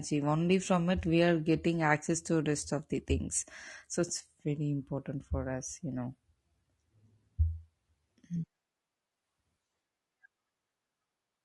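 The speech was likely squeezed through low-delay AAC compression, of the AAC-ELD kind used for video calls, at a rate that fits roughly 32 kbps. At that rate bits run short, so the damage is plainly audible from start to finish: the voice sounds rough and grainy, with noise filling the gaps between harmonics and a thin, artificial-sounding top band.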